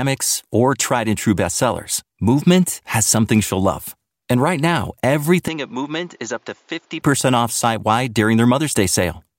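From 5.48 to 7.02 s, after "right now", the recording system likely switched its input to a poorer device. The substitute path carries nothing above 7.2 kHz, so the speech turns dull and boxy, drops in level by around 10 dB, and gains a faint new background noise roughly 35 dB under the speech. The change happens with no gap in between. Full bandwidth and level return before "off site wide during".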